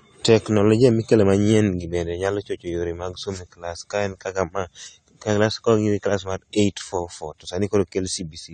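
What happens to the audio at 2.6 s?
At 2.6 s you're hearing AAC compression, and it runs through the whole clip: nothing above 9 kHz, plus a dull, smeary, warbly texture, likely from a low bitrate around 32 kbps.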